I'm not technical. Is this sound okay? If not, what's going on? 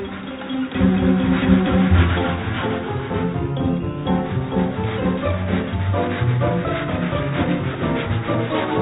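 Yes, this sound is okay; it just has the narrower tone of an ordinary phone call, with nothing above 4 kHz.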